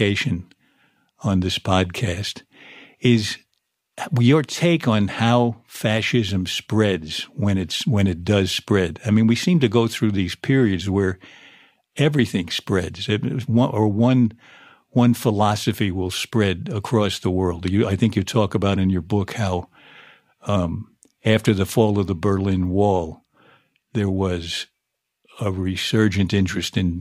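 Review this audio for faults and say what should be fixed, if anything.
No faults; nothing needs fixing.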